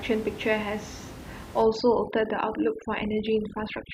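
From 1.62 s to the end of the clip, overdone noise removal sets in: the room noise, about 15 dB below the speech, is suppressed too hard, so the background drops and breaks up into twinkling specks, and quieter speech bands vanish.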